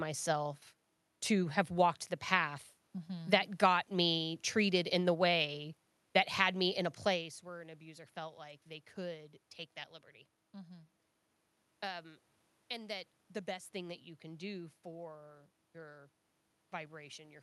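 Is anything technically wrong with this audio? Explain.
No, nothing here points to a technical fault.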